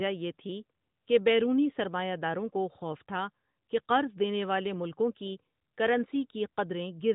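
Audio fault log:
Nothing stood out on listening to the speech in this recording.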